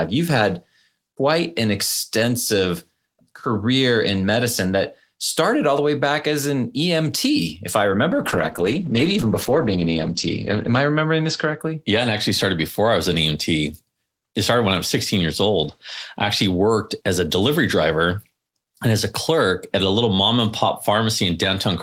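Right after "if I", from 8.13 to 11.65 s, there's a call bitrate drop: the encoder was starved of bits, so the speech goes rough and muffled, top end cut at 8 kHz, consistent with roughly 32 falling to 12 kbps.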